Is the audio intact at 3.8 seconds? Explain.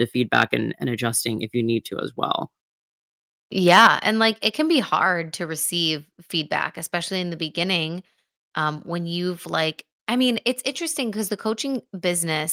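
No. From 3.73 to 3.87 s the loudest peaks are flattened and carry a harsh crackle, likely a microphone overload with the input pushed about 5 dB past full scale and roughly a tenth of the samples cut off. Unlike codec distortion, the damage follows only the peaks. At 3.87 s the microphone volume steps down by about 6 dB, and voice and background fall together at once, likely because the software cut the input gain after that clipped peak. A fade would drop gradually instead.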